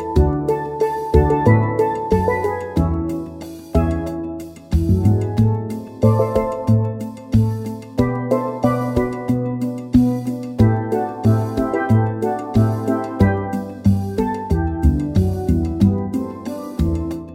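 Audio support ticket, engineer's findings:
No faults found on listening; no dropouts, clipping, glitches or level jumps heard anywhere in the recording, nothing to escalate.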